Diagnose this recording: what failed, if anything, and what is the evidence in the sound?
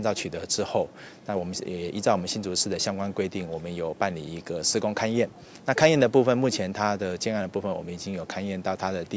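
Nothing in the recording stood out as a fault on listening, so there is no failed stage to point to.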